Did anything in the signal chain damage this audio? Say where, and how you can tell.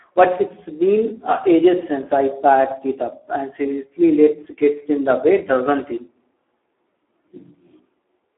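Yes. The damage is at the codec stage, from Speex throughout. Nothing sits above 3.8 kHz, the band runs roughly 300 Hz to 3.4 kHz, and the speech is hoarse and noisy, which fits a low-bitrate setting near 8 kbps that starves the excitation.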